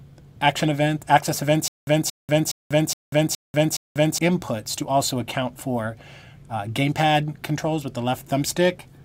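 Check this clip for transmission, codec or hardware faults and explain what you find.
There's one fault: a stutter with silent gaps from 1.68 to 4.18 s. A short burst of about 225 ms plays, then roughly 190 ms of dead digital silence, and that same burst comes back six times at a steady period of about 417 ms, so it ticks along like a stuck loop. The likely cause is the player or stream stalling, replaying the last fragment on each retry and then running dry. Whatever audio belonged in that stretch is gone.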